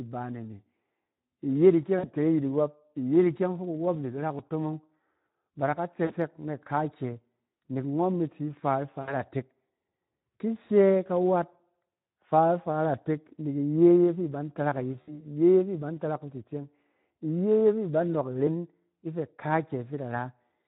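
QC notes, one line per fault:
throughout: Speex codec damage, plainly audible; few bits for the excitation leave the speech hoarse and noisy, which fits an 11 kbps setting.
1.99–2.11 s, 6.05–6.15 s (just after "da ka"), 9.01–9.15 s, 15.01–15.26 s: VoIP packet loss concealed by the speech codec. The decoder stretched its last pitch and filter into a fading buzzy tone or coloured noise, which fits 40 to 60 ms of lost audio, and the speech stays weak briefly afterward.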